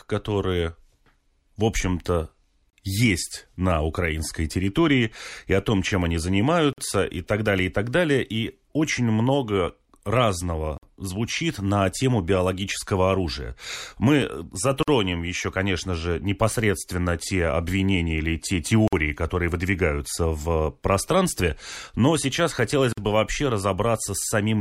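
At 2.70, 6.73, 10.78, 14.83, 18.88 and 22.93 s, every 4 s, the speech breaks at a gap at a join of encoded pieces: untrimmed encoder delay and padding leave 29 ms, then 49 ms, of near-silence, seen as blank vertical stripes across the spectrogram before speech resumes.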